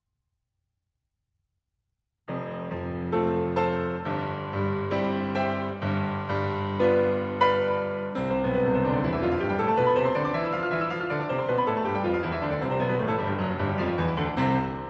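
Nothing here stands out as a fault; the sound just carries the usual character of a call path, with the top end rolled off around 8 kHz in the way an Opus call at a modest bitrate tends to leave it.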